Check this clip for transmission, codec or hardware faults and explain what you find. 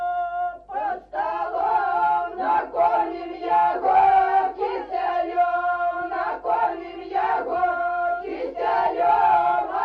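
Two faults are audible: codec damage throughout and a short burst of reception errors.

MP2 compression, throughout: the sound is dull and granular, with a gurgling edge. This is likely MP2 coding starved of bits, around 80 kbps, switching off upper sub-bands.

DAB burbling, 1.58 to 1.61 s: a brief burst of burbling. A small fraction of corrupted bits reached the decoder, putting errors into the audio data across about four frames.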